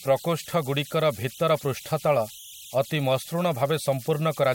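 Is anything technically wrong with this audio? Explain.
Yes. Converter idle tones run throughout the speech. An undithered delta-sigma converter settles into repeating bit patterns whenever its input is small, producing a whistle around 3 kHz in pauses and grainy noise beneath quieter passages, about 21 dB below the signal.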